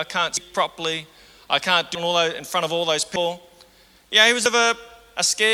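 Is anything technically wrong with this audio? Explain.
Yes. At 0.37, 1.95, 3.16 and 4.46 s the audio jumps abruptly, most likely from a dropped buffer (overrun): the recording software failed to collect incoming samples before the hardware overwrote them, so a stretch was discarded and the surrounding audio spliced together without a gap. Each splice is heard as a sudden skip forward, losing roughly 300 ms at the first two points and roughly 200 ms at the last two.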